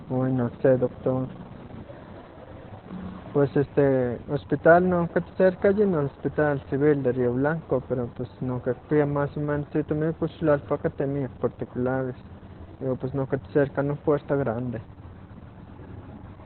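From start to finish the speech carries Opus voice compression at a very low rate, consistent with roughly 8 kbps in its SILK linear-prediction mode. The band is cut to narrowband, so nothing above about 4 kHz survives, and the coarsely coded excitation makes the voice muffled, hoarse and faintly robotic. Unlike a simple low-pass filter, the damage lies in the voice's texture and not only its dullness.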